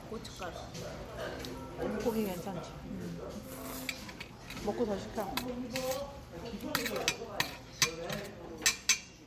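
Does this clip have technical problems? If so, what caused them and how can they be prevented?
No, nothing in this audio needs fixing, so no prevention steps are called for.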